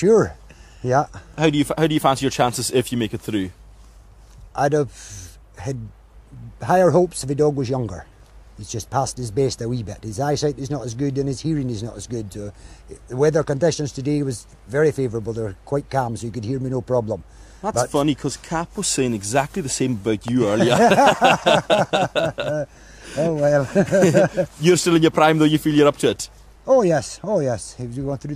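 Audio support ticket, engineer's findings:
Loud pop, double, 20.28 to 20.50 s, peaking a few dB above the sound. Likely a voltage step from a plug or switch. Sound continues underneath, so not a dropout.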